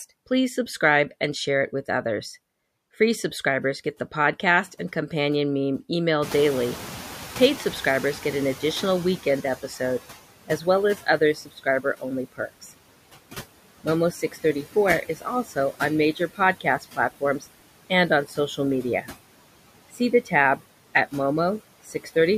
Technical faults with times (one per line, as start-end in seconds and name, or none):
0.00-22.38 noise suppressor artifacts
6.22-10.00 noise suppressor catching up
10.47-12.72 speech cut by the noise suppressor
13.84-19.08 speech cut by the noise suppressor
19.93-21.13 speech cut by the noise suppressor
21.85-22.16 speech cut by the noise suppressor